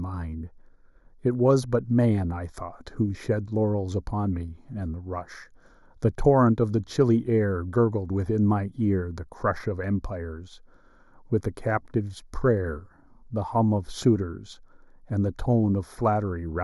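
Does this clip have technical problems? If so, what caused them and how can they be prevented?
Yes. Channel delay (comb filtering) runs throughout this speech: one channel lags by roughly a fifth of a millisecond, and the mono sum cancels near 3 kHz and its odd multiples, leaving a hollow, phasey tone. Unlike flanging, these notches never move. Align the channels before summing to mono, or keep the source in stereo.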